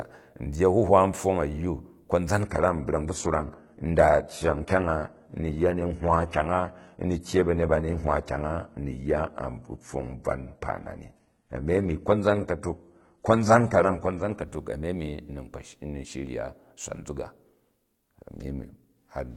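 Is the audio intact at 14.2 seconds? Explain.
No. At 14.2 s the speech is still inside an adaptive stream at a lower bitrate, from 2.42 to 14.42 s. The player switched abruptly, with no gap, to a leaner rendition, which fits a low-bitrate HE-AAC stream. Codec artefacts rise, and a spectrogram shows a hard ceiling near 11.8 kHz across that span.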